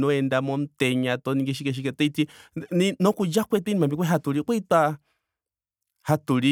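No technical faults can be heard anywhere in the speech.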